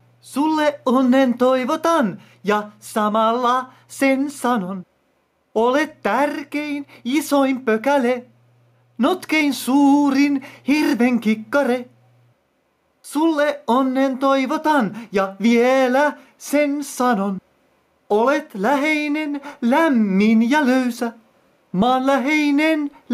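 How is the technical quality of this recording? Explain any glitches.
The recording has gain pumping all the way through. The gain ducks by around 10 dB under each loud sound, flattening the dynamics. Likely the input gain is far too hot and a fast limiter keeps clamping down.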